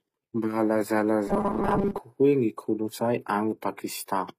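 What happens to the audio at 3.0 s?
At 3.0 s, as throughout, the speech shows likely HE-AAC compression: treble rebuilt from copied lower bands sounds gritty and lispy, with nothing above 15.5 kHz.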